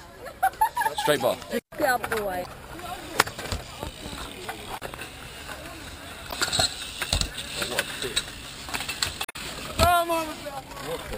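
Damaged data in a compressed stream at 2.42–2.46, 6.29–6.34 and 9.22–9.36 s: corrupted frames throw off the decoder, giving brief glitches heard as a chirp, squawk, click or short hole.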